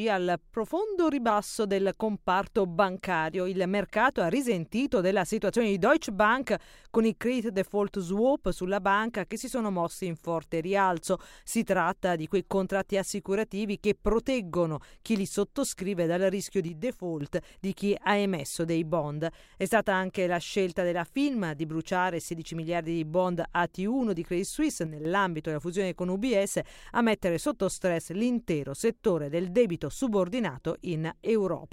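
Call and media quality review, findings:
Sudden level dips, about 6 dB, at 16.68–17.21 s (roughly half a second) and 24.86–25.05 s, snapping straight back after each. Fits one channel dropping out upstream of the mono fold-down, likely a flaky stereo link or cable. Whatever both sides shared drops by half in the sum, and anything carried only on the lost side vanishes for those stretches. Worth checking the stereo feed before the downmix.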